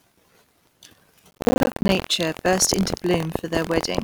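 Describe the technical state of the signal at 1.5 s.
At 1.5 s, processor overload crackle runs from 1.31 to 2.08 s. The processor misses many roughly 10 ms buffer deadlines in a row, leaving dozens of short silent gaps. These are heard as gritty crackle, and a spectrogram shows repeated broadband vertical streaks. Underneath, buffer tearing continues throughout. Writer and reader cross each period, splicing in a small slice of audio about a tenth of a second old. This produces a 43.1 Hz robotic buzz, which fits a 1024-sample buffer, and the waveform shows regularly spaced hard discontinuities.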